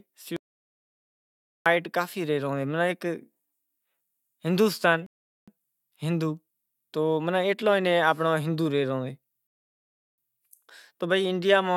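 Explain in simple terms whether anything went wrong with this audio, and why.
From 0.36 to 1.66 s the speech cuts to dead silence for about 1.3 s, then returns mid-flow. This is an audio dropout to silence, likely from a lost input, and that stretch is gone for good.

At 5.06 s and again at 9.47 s the speech freezes into silence, then picks up exactly where it left off, adding 0.41 s and 0.71 s. These are rebuffering stalls: the player ran out of downloaded audio and waited for more.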